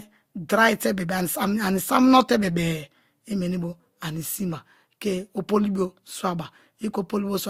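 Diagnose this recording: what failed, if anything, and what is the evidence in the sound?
Throughout the speech, two distinct layers of coding artefacts are heard together, with nothing above 19.9 kHz. This is likely transcoding between lossy codecs at the codec stage, fitting Vorbis re-encoded to Opus at about 48 kbit/s.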